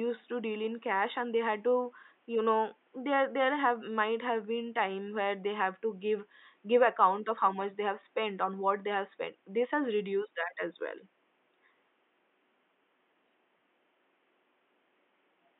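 Nothing goes wrong technically anywhere in this speech recording; the faint room noise sitting about 42 dB below the speech is just the sound of the space the microphone was in.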